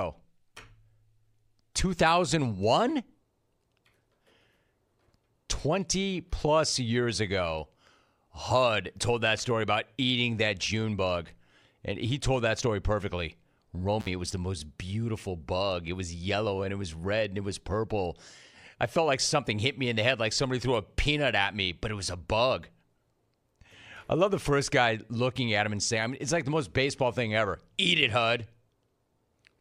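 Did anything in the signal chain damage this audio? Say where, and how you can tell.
Yes, the damage is in the analogue wiring: an intermittent contact, where a loose cable or plug briefly lost its connection. Between 14.00 and 14.08 s, just before "it was the most", the speech drops out for about 50 ms. You can hear a crackle where the contact breaks and again where it reconnects, with faint hiss in between. That gap shows the signal path was physically open rather than muted by processing.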